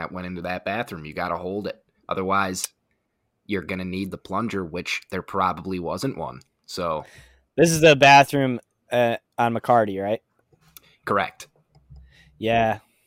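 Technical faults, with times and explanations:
No technical faults can be heard in this speech recording. There is nothing here that needs a time or an explanation.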